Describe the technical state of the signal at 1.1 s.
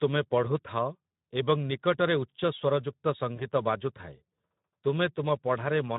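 At 1.1 s you're hearing the same Speex codec damage that runs through the whole clip, and it's plainly audible. The speech has the grainy, hoarse edge you get when this CELP coder is short of bits for the excitation, so the fine detail of the voice gets replaced by a noisy approximation. The amount of roughness points to a low setting, roughly 11 kbps, well below where Speex sounds clean.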